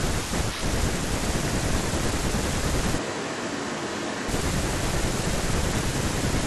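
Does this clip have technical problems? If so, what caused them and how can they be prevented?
Yes. From 3.00 to 4.27 s the speech abruptly turns roomy and thin, drops about 5 dB and carries more background noise, likely a switch to a distant microphone. Monitor the close microphone's feed and secure its connection and power so the recording never falls back to a far source.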